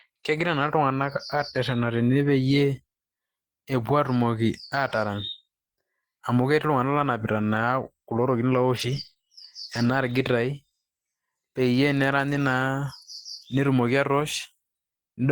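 From 1.33 to 1.39 s, 2.19 to 2.29 s, at 7.41 s, 8.77 to 9.11 s, 9.73 to 9.87 s, 12.33 to 12.39 s and 14.19 to 14.25 s, lost packets were rebuilt from error correction. Each time, the decoder played a low-bitrate copy carried in the following packet, so there's no gap, but the speech turns briefly rougher and noisier. The longest patch, about 180 ms, suggests a run of several lost packets. From 9.13 to 9.17 s, a short concealed packet loss fills a 20 ms hole by extending the preceding sound and blending back. It is heard as a brief smear.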